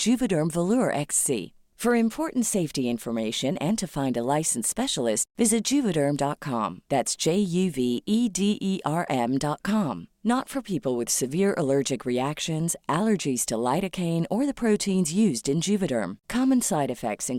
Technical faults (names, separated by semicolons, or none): none